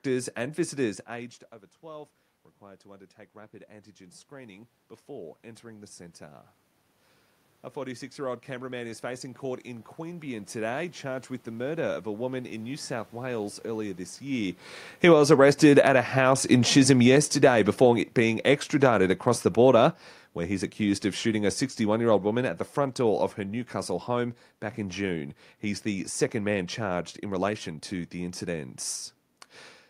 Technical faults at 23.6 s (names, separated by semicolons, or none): automatic gain falling